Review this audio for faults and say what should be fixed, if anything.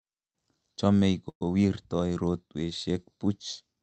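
Call audio freeze at 1.29 to 1.43 s: the sound smears into a fading buzz or hiss, goes silent for about 70 ms, then resumes intact. The likely cause is a jitter buffer running dry. A bit more jitter buffer headroom or a steadier network path would fix it.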